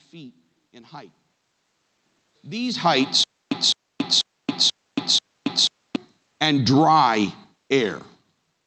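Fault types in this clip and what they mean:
Automatic gain rising: the gain control judged the input too quiet and raised its level, so speech and room noise swell together by about 4 dB from 6.67 to 7.35 s. The waveform envelope widens steadily there, and the spectrogram brightens evenly, noise floor included.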